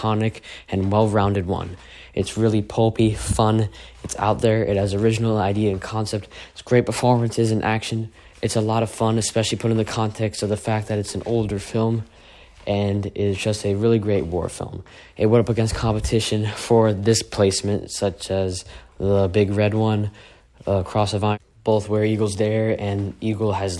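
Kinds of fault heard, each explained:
No audible faults anywhere in this recording.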